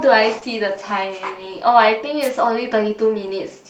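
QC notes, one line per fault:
0.39 to 0.43 s, short concealed packet loss: roughly 20 ms of the speech arrived too late, and the decoder papered over about 17 ms of it by extending what came just before, then eased back in. You hear a tiny smear or wobble rather than a clean gap.
2.21 to 2.30 s, wireless microphone noise hit: the FM radio link faded for a moment, so receiver noise came up over the speech for a bit under a tenth of a second. It comes across as a quick swish of static.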